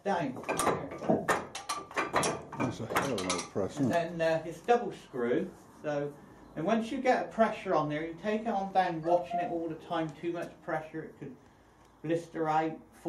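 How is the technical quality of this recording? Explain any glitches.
No glitches can be heard anywhere in this recording. Nothing in the audio stands out as a technical problem that needs explaining.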